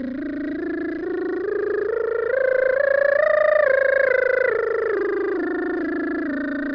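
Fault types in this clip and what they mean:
Nothing to flag here; this bit of music comes through without any faults to point out.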